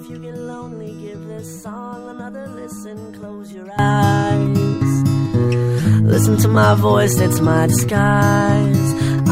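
At 3.79 s the level leaps by about 18 dB in a single step and stays there to the end, a sudden gain jump. The background noise rises by the same amount at the same instant, which marks it as a change of digital gain, likely a setting or bit shift applied with no ramp. Unlike automatic gain control or a compressor, there is no gradual swell or pumping, just one abrupt, permanent step.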